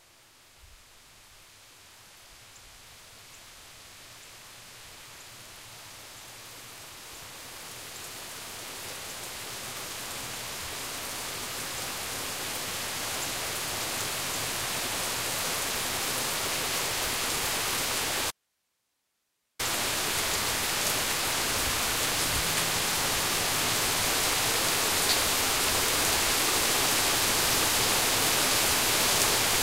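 At 18.31 s there's an audio dropout to a faint residue: the sound cuts off abruptly for about 1.29 s, leaving only hiss roughly 50 dB below the signal, then snaps back at 19.59 s. It's likely a brief signal loss with the downstream path still live.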